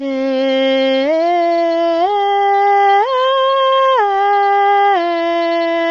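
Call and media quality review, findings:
Music rough and grainy throughout, damage plainly audible. Spectrogram: hard ceiling at 7.7 kHz, smeared harmonics, noise filling gaps between partials. Likely low-delay AAC compression (AAC-ELD). Short frames resolve pitch poorly; bitrate around 24 kbps.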